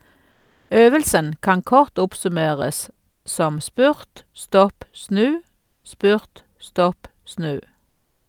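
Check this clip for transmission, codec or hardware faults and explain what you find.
Four pauses in this speech carry comfort noise in place of the background: 0.31–0.69 s, 3.11–3.25 s (between "kan kort oppsummeres" and "som spurt"), 5.61–5.83 s (before "spurt stopp") and 7.89 s to the end. The real room tone, already about 50 dB below the loudest speech, turns into a flat, featureless hiss that shifts level by about 2 dB up or 1 to 4 dB down. The cause is likely Opus DTX: the sender stops transmitting during pauses and the receiver synthesises noise to fill the gap.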